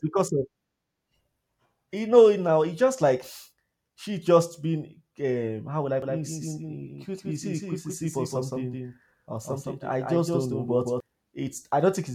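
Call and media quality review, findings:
Doubled audio track, 6.02–11.00 s, starting just after "um how would I". Likely a second, slower capture path or misaligned edit layering a second copy of the speech. Full-band echo roughly 150 ms behind, about 5 dB quieter, no decay or room colour. Starts and stops abruptly.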